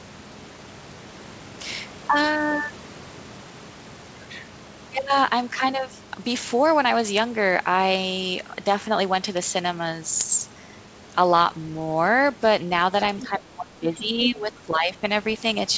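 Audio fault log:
13.05–13.28 s and 14.24–14.31 s, other side's voice leaking through: brief scraps of a second voice, faint at first, then nearly as loud as the talker, likely residual loudspeaker echo; spectrogram shows overlapping harmonic traces.
13.22–15.04 s, speech suppressed in double talk: the talker's level sinks deeply and unevenly for about two seconds, likely the echo canceller ducking both voices; the waveform envelope visibly hollows out.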